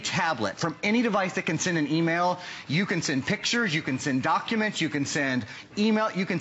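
No technical faults can be heard anywhere in it.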